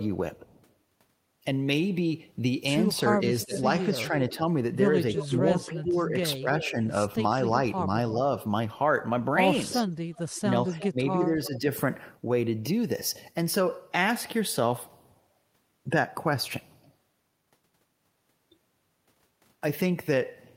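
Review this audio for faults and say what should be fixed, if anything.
Echo leak at 3.06–3.57, 5.17–6.71, 10.16–10.9 and 11.45–11.59 s: a quieter copy trails by about 350 ms, likely residual loudspeaker pickup the far-end canceller missed.

Speech suppressed in double talk at 3.12–4.42, 5.24–6.79 and 9.71–11.65 s: the talker dips by up to about 15 dB while both sides overlap, likely as the canceller turns everything down.

Worth fixing: better canceller tuning or a headset on the speakerphone side would stop both.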